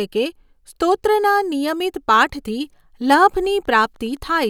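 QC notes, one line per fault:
3.05–4.50 s, Wi-Fi interference: faint ticking just under ten times a second, roughly 40 dB below the speech. The audio circuit rectifies a nearby radio's 102.4 ms beacon. On a spectrogram it shows as evenly spaced thin vertical broadband lines, and on the waveform as tiny regular spikes.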